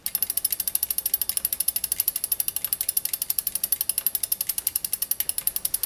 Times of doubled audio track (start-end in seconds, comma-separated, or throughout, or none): none